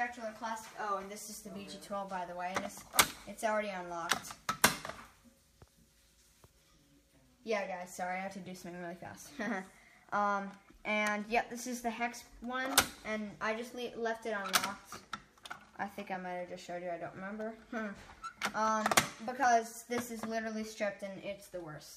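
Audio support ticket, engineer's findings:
No faults found on review. Nothing heard in the audio points to a problem in any component along the chain.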